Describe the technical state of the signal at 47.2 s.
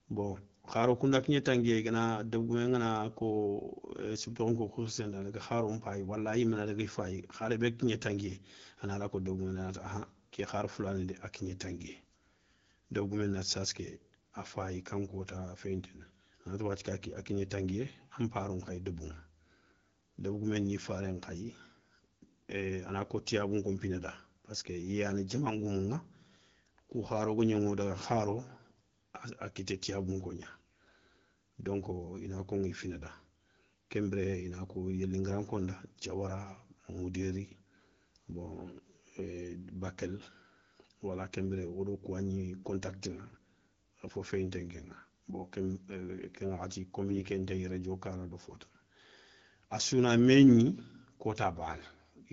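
At 47.2 s the speech carries AMR bit errors, from 47.08 to 47.24 s, a span that fits about eight 20 ms frames. With roughly one bit in twenty flipped, pulse positions and fine pitch, gain and spectral values decode wrongly, so the speech turns hoarse and gargly. On a spectrogram, harmonics smear into noisy, broken striations while the waveform's level stays roughly steady.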